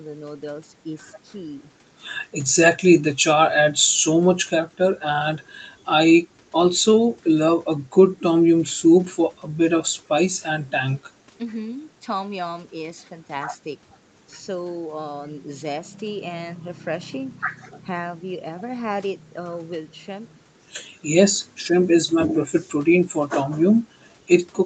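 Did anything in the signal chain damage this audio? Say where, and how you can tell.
No, nothing in the signal chain damaged this audio.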